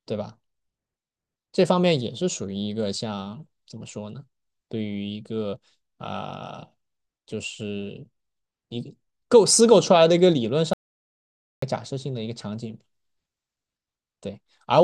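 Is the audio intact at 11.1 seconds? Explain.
No, an audio dropout to silence runs from 10.73 to 11.62 s, about 0.89 s. The input was likely lost while recording continued, writing silence, so the speech cuts off abruptly into dead silence with no room tone, then resumes mid-flow.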